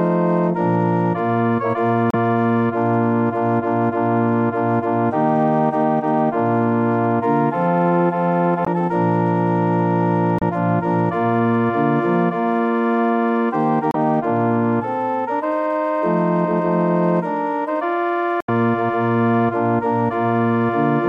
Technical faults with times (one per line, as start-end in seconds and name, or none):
2.10-2.14 damaged data in a compressed stream
8.63-8.68 damaged data in a compressed stream
10.39-10.43 damaged data in a compressed stream
13.91-13.96 damaged data in a compressed stream
18.40-18.49 damaged data in a compressed stream